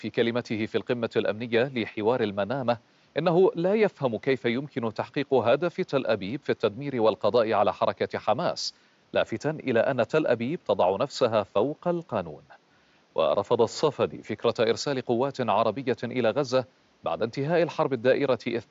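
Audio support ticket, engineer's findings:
Engineer's findings: no fault found in this speech recording; the room's background noise sits about 39 dB below the speech.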